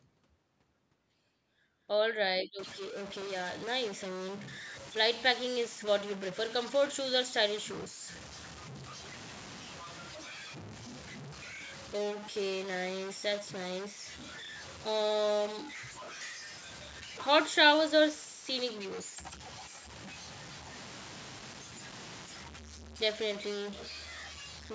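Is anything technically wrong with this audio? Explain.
Yes. From 2.59 s to the end, a single data bit is likely stuck at a fixed value, from a broken data line or converter. Roughly half the samples are pushed off by that bit's weight, following the waveform, so the speech is distorted and the pauses fill with noise. The call microphone processing can be heard in the missing low bass and nothing above 8 kHz.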